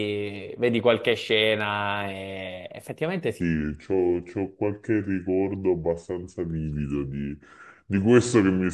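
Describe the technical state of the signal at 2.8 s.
At 2.8 s the signal is intact, with no audible fault at that point.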